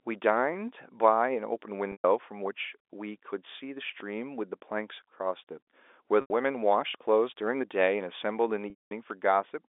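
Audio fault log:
1.92–2.04 s, 6.21–6.30 s, 8.70–8.91 s: packet loss with pitch repetition. Gaps of about 120, 90 and 210 ms are bridged by repeating the last pitch period. It fades out over roughly 50 ms, leaving a brief silence before the speech cross-fades back. Unlike a plain dropout, each gap begins with a held, buzzy tone.
4.00 s, 6.95 s, 9.10 s: DC step. The waveform's zero line jumps abruptly, then decays as a 20 Hz high-pass pulls it back. Each step is a low thump or click, and the speech carries on unchanged over it, which separates it from a dropout or a packet-loss gap.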